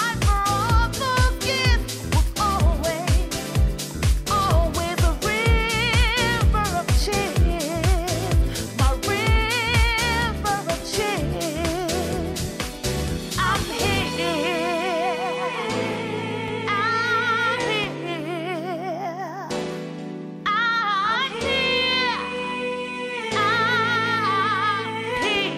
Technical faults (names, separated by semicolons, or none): none